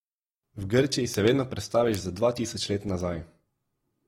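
Two sharp, broadband ticks at 1.14 s and 1.95 s are bit error spikes: a single flipped bit briefly throws one sample's value off by a power of two.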